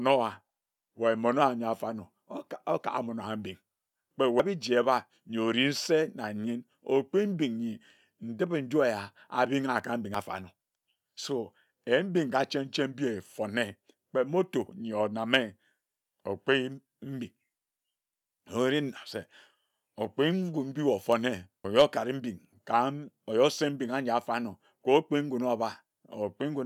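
The speech skips abruptly at 4.39 s, at 10.15 s after "eya aringha ka", and at 21.65 s before "okare mbing kam wae". Each time, roughly a third of a second vanishes, which is likely audio missing between 6-second chunks.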